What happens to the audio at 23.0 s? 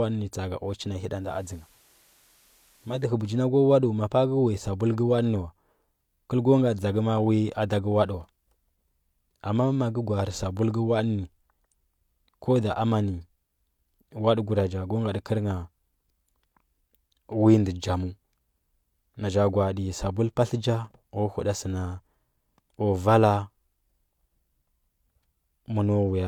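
Nothing goes wrong at 23.0 s; the speech there plays through intact, with no dropout, click, distortion or other audible fault.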